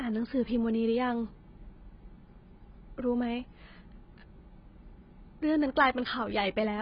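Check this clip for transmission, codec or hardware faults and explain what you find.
One codec fault runs through the whole speech clip: AAC compression damage. The band stops at 5.1 kHz and the sound is dull and smeared with a warbling texture, likely from AAC-LC at a bitrate near 16 kbps discarding the upper spectrum.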